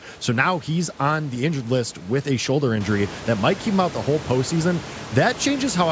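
No technical faults are audible in this speech.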